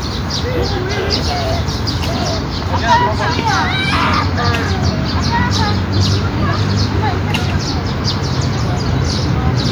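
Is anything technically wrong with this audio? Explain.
No, nothing technical stands out here; these sounds come across just as you'd hope, with nothing to flag.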